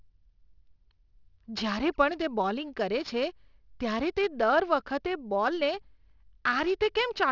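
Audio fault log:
Throughout, aliasing: content above 6 kHz folds back as gritty, metallic sibilance about 20 dB down, fitting a 12 kHz rate, unlike mere dullness.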